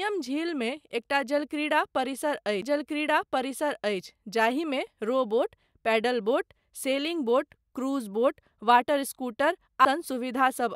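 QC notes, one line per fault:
2.61 s, CD skip between "झीलमे एकटा" and "जाहिमे रॉ". A brief mute of about 10 ms and a tick, then playback resumes elsewhere on the disc spiral.
9.85 s, CD skip. An even shorter mute of about 5 ms, heard as a tick as the laser jumps tracks and resumes.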